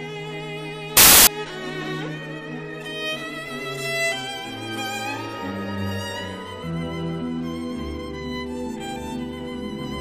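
From 0.97 to 1.27 s there's a burst of samples built from the wrong bytes: misassembled sample bytes turn the low bits into loud broadband noise.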